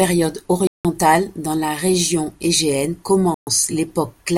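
A likely Bluetooth stall, with delayed packets leaving the headphones' buffer empty, cuts the speech to silence at 0.67 s for about 175 ms, just before "dans la région", and again at 3.34 s for about 126 ms before the sound resumes.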